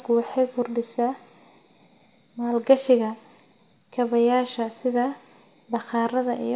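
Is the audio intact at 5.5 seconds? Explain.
Yes, the speech at 5.5 seconds is intact, with no audible fault at that moment.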